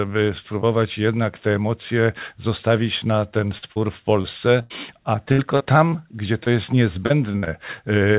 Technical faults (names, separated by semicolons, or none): repeated packet loss (robotic sound)